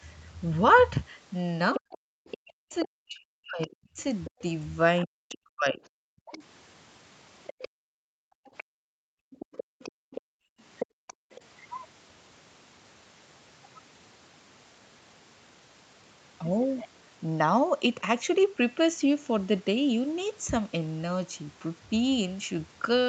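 From 1.74 to 5.35 s a second voice sits under the speech, roughly 15 dB below it. This is the other side's voice leaking through: the far end was most likely played on a loudspeaker and picked up by the microphone, and the echo canceller failed to subtract it fully. A faint scrap returns at 6.32 to 6.38 s, around 25 dB down, and a longer stretch runs from 7.44 to 11.41 s at about the same level as the first.

Over the same opening stretch, 1.79 to 6.42 s, the main speech is repeatedly pulled down, with dips reaching some 40 dB and adding up to roughly three seconds. This is speech suppressed in double talk: with both sides active, the canceller likely could not tell the near talker from the echo and attenuated everything. The voice drops out in pieces or goes dull while the other side is heard. A shorter bout follows between 7.7 and 8.99 s, totalling only a fraction of a second but just as deep.

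From 9.27 to 11.31 s, during the later leak, the room sound itself ducks, by about 36 dB at its deepest and for about a second in total. This is background gated by the echo canceller: while the loudspeaker signal was present, the canceller clamped the microphone hard, so the ambience vanishes and then returns when it releases. Throughout, the audio has nothing above 8 kHz, as expected from the call path.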